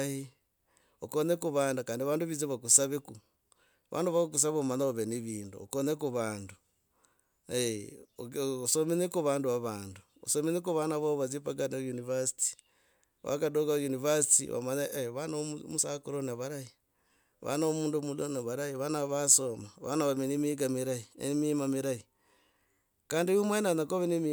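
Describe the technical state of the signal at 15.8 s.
At 15.79 s the speech jumps abruptly, skipping ahead with no gap of silence. This is likely a dropped buffer (overrun): samples were overwritten before being read, so roughly 40 ms of audio vanished and the surrounding sections were spliced directly together.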